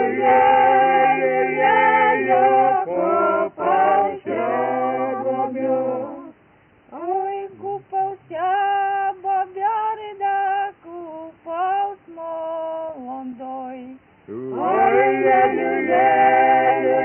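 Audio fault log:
Nothing stood out on listening, with no audible problems anywhere in the audio.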